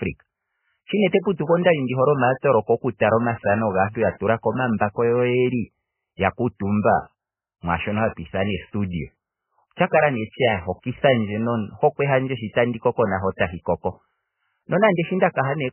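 MP3 compression runs through the whole speech clip, likely at a very low bitrate near 10 kbps. Nothing survives above 3.1 kHz, and heavily starved frequency lines flicker, giving a muffled, watery, swirling sound.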